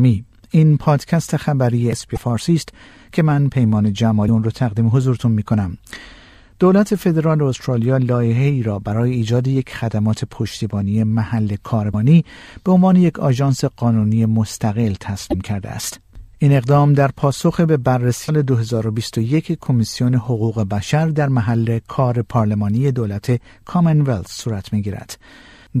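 Brief glitches at 2.13–2.18, 4.25–4.29, 11.90–11.95, 15.30–15.34 and 18.25–18.29 s, each about 45 ms, are damaged data in a compressed stream. Corrupted frames are misdecoded or refused while the decoder hunts for sync.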